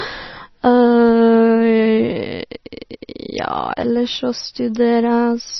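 Speech with heavy MP3 compression damage throughout. Nothing is present above 5.9 kHz, where the encoder has cut the treble. Weak frequency lines are dropped frame by frame, which points to a low bitrate around 26 kbps as the likely cause.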